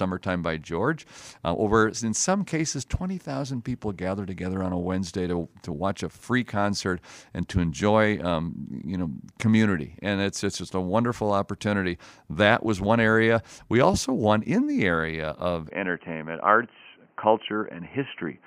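At 15.7 s the speech turns dull and boxy with nothing above 3.1 kHz, likely an input switched to a poorer device; the spectrogram's top cuts off abruptly, with a faint new noise floor but no gap or level change in the waveform.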